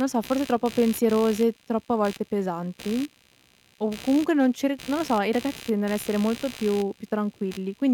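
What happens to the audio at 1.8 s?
At 1.8 s the clip carries computer activity noise that runs through the whole recording. Shifting processor or peripheral load disturbs the ground shared with the audio circuit, so a buzzy, scratchy chirping, pulsing around 70 times per second and roughly 20 dB below the speech, sits under it, independent of what is said.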